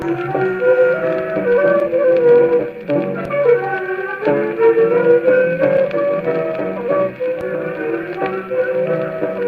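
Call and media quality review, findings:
No audible faults found; no dropouts, glitches, level jumps or timing irregularities observed.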